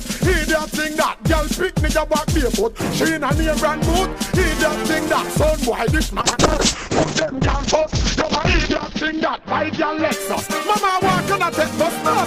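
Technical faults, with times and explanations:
6.2–12.17 s call bitrate drop: coarse, watery coding with highs cut from 20 kHz to 8 kHz, fitting a fall to roughly 7 kbps; no gaps, unlike packet loss.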